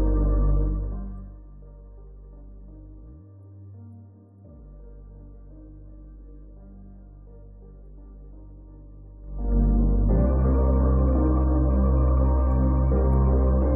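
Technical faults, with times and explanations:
0.52 to 1.44 s, zipper noise: The level drops by roughly 25 dB in 1 dB steps. It moves about thirty times a second with no smoothing. Each jump puts a tiny click in the waveform, so a fine ticking rides on the sound as it fades.
9.2 to 9.56 s, zipper noise: The level rises by roughly 25 dB in coarser 3 dB steps at the same rate. The bigger jumps give harsher, more distinct clicks, heard as a brief zipping.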